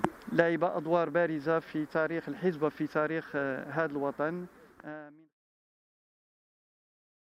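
Nothing stood out on listening; the sound eases away in a smooth fade-out that begins around 4 s and reaches silence at 5.37 s, with no click or hard edge.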